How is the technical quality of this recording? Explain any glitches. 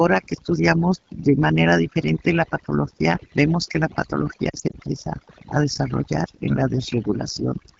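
The recording's technical quality is poor, with three problems: heavy processing and coding throughout and a brief cluster of dropouts.

Overdone noise removal, throughout: a noise reducer set too aggressively has pulled down or removed individual frequency bands it judged to be noise, taking quiet parts of the speech with them. The background drops and breaks up into twinkling specks.

AMR wideband (HD Voice) codec, throughout: the speech passes through a low-rate wideband phone codec that models the vocal tract with pulse excitation below 6.4 kHz and fills the band above with shaped noise. Its plainly audible roughness and rasp fit one of the lowest modes, around 8.85 kbit/s.

Lost AMR speech frames, 4.49 to 4.76 s: failed frames were scattered across about 240 ms, totalling about 100 ms of lost speech, with no gap longer than 40 ms, which points to short runs of 20 ms frames. The decoder filled each gap by repeating the last good pitch and vocal tract settings at falling gain, so the sound warbles and dips repeatedly before recovering briefly weak or rough.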